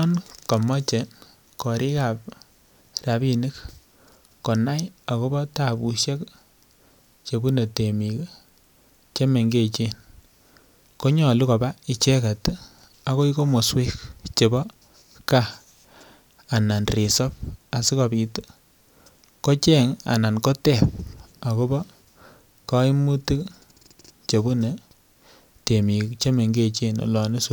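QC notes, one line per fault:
No faults found in this speech clip. Nothing in it calls for a timed entry.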